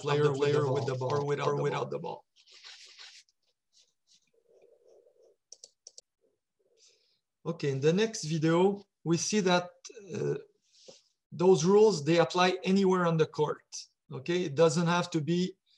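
A doubled audio track runs from the start to 6.0 s. A second, equally loud copy trails by about a third of a second, then stops abruptly. A slower second capture path is the likely cause.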